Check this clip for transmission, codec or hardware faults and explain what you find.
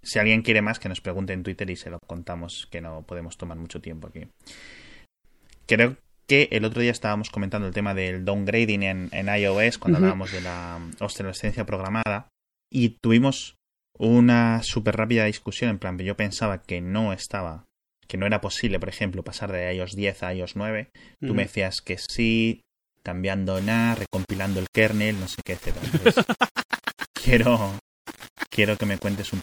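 Three faults are audible: codec damage throughout, three short dropouts at regular joins, and grainy distortion at the end.

MP3 compression runs through the whole speech clip, likely from a low-rate encode; the dullness and swirl fit roughly 64 kbps. Starved of bits, the encoder cuts the treble and drops weak frequency lines frame by frame, so sibilants chirp and the sound turns watery.

A gap at a join of encoded pieces occurs three times, every 10 seconds: at 1.99 s, between "y se lo" and "contamos que no podemos", for 39 ms; at 12.03 s, after "hablábamos de la obsolescencia", for 32 ms; and at 22.06 s, after "me decías que", for 32 ms. Separately encoded segments were joined with their encoder delay and end padding left in, so the speech drops briefly to silence and resumes where it left off.

Low bit depth without dither affects the audio from 23.56 s to the end, likely from rounding to very few bits, consistent with about 6 bits. 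With no dither, the rounding error tracks the signal, sitting about 20 dB below it, so quiet passages sound gritty and the faintest parts sputter or vanish.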